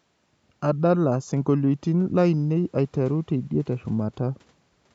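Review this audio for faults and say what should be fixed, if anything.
Nothing needs fixing in this speech; the call microphone processing on it trims the lowest bass and leaves nothing above 8 kHz, as that processing normally does.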